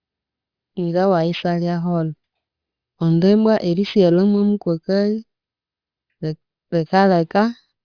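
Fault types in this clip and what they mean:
Aliasing: high frequencies fold back below 5.5 kHz, which fits unfiltered downsampling to 11 kHz. Sibilants sound gritty, with aliases about 25 dB down.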